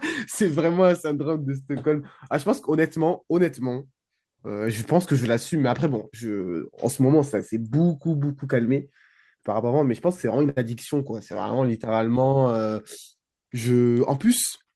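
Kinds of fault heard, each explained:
Short stall from a late packet: At 10.49 s the speech hangs for a moment, one sound drawn out to about 0.09 s with a faint buzz or dip before it carries on where it stopped. A packet arrived late and the jitter buffer ran dry, so the receiver stretched the last audio it had, roughly 71 ms worth, until the packet turned up. Nothing is skipped, but everything after it sits 71 ms later.
Jitter buffer speed-up: From 13.70 s to 14.64 s the speech sounds slightly rushed, running at about 108% of normal speed while the pitch stays unchanged. The buffer was holding more audio than it aims for, likely the extra delay left by the earlier stall, so the receiver trimmed out many short pitch-period-length slices in a row. Together they remove around 70 ms and pull the playback back toward its usual delay.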